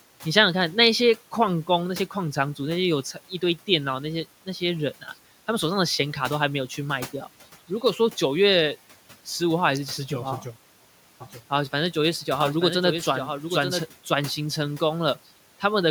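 A doubled audio track runs from 11.20 to 13.82 s in this speech recording, where a second full-band copy of the speech trails the original by about one second at roughly 5 dB lower, with no decay or room colour of its own. The echo cuts in and out abruptly at those points, which likely means the same signal reached the mix twice, once through a slower path. Quiet room noise, about 22 dB under the speech, sits beneath it.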